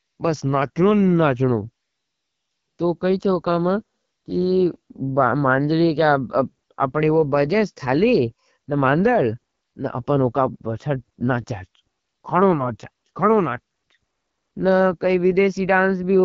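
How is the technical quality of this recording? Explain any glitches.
The recording is speech with plainly audible codec damage from start to finish. The fault throughout is AMR wideband (HD Voice) codec coding at a low rate, with a roughness that fits 8.85 kbit/s, one of the two lowest AMR-WB modes. Below 6.4 kHz the codec rebuilds speech from a vocal-tract filter driven by pulses. At this rate the pulses are sparse, so voiced sounds turn rough and raspy. The 6.4 to 7 kHz band is filled with shaped noise, so the top end sounds hissy rather than crisp.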